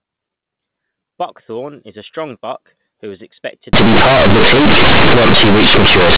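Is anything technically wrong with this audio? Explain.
Yes. From 3.73 s to 6.16 s, right after "buck who was expected", the telephone-band audio shows companded audio read as linear. The mu-law G.711 bytes are being played as plain 8-bit samples without expansion. Because mu-law packs the sign into the top bit and spaces levels logarithmically, every sign change now swings the output across about half its range, and quiet passages come out as loud as peaks. The result is harsh, very loud, buzzy distortion, with heavy noise filling the pauses.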